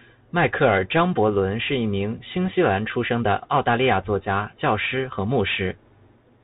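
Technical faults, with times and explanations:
Throughout: Bluetooth CVSD headset codec. The speech is narrowband, with nothing above 4 kHz. The codec sends one up-or-down bit per sample, which fits a 64 kbps link. Its adaptive step lags fast, loud highs. S sounds turn scratchy. A granular hiss sits underneath.
2.45–2.50 s: bit errors on a Bluetooth voice link. Between "是一名新" and "西兰出生", a brief rushing crackle appears. It sounds like an error rate of around 1 percent. Each CVSD bit carries only a small step, and errors fade quickly. So the damage is noise, not loud clicks.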